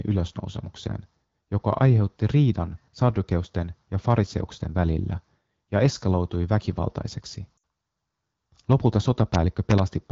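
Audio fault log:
7.57–7.63 s, lost AMR speech frames: just after "välillä ja eskaloitui väkivaltaiseksi" the speech smears into a held warble and dips toward silence for about 60 ms, then returns briefly rough. Damaged frames were discarded, so the wideband decoder repeated the last good pitch and vocal tract settings at falling gain.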